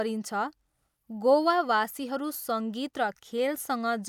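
A speech recording, with nothing technically wrong with it.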